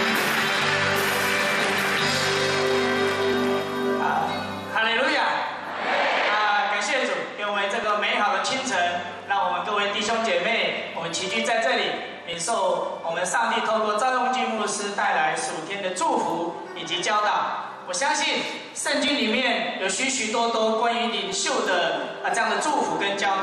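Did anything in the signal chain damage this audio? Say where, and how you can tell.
Yes. Regular clicks recur every 2.25 s from 1.1 s to 21.3 s, about ten in all. These are clock drift buffer slips at the driver or buffer stage. Two clocks likely differ by roughly 300 ppm, so each slip drops or repeats a few dozen samples.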